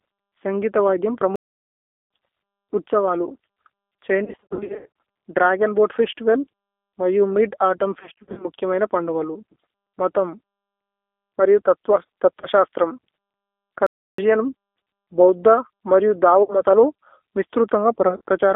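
Throughout the speech, the band is held to roughly 300 Hz to 3.5 kHz, and the sound has the slightly rough, synthetic texture of the G.729 codec at 8 kbit/s. The voice is rebuilt from a vocal-tract filter, a pitch predictor and a few pulses per frame. The damage is plainly audible as a constant coarseness. It differs from a mere telephone band-limit because that texture is present in every stretch, not only as missing treble.

After "സന്ഘിഥ വൈധ്യമ്", a playback stall runs from 1.36 to 2.10 s. The audio simply goes silent for about 0.75 s, likely because the player was starved of data or its thread was blocked, and then resumes. Unlike packet loss, the gap holds no sound at all: no buzz and no fading tone.

From 4.24 to 4.89 s, just before "ദ്രഗോന് ബോഅത് ഫേസ്തിവല് മരിയു", comes VoIP packet loss concealed by the speech codec. About 490 ms of audio is missing, scattered over roughly 720 ms, with the longest single gap about 90 ms. 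The decoder stretches the last pitch and filter into a buzzy tone or coloured noise that fades, and the voice stays weak for a moment after the packets return. The same effect recurs from 8.00 to 8.46 s, between "ഫേസ്തിവല് മരിയു മിദ് ഔതുമ്ന്" and "മുഖ്യ മൈന പന്ദു ഗാലു", where about 230 ms is lost.

Briefer concealed losses follow at 12.41 to 12.47 s and 16.43 to 16.60 s. A scattered cluster at 18.09 to 18.21 s rounds out the pattern.

A second silent stall of about 0.32 s falls at 13.87 to 14.18 s.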